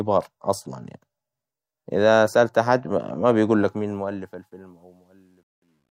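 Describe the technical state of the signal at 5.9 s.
Truncation distortion on a fade is present at 5.9 s, within the fault that runs from 3.6 s to 5.98 s and is worst from 4.74 s onward. The fade-out stage keeps too few bits without dither, consistent with roughly 11-bit resolution, so the nearly silent tail turns into coarse steps that sound gritty.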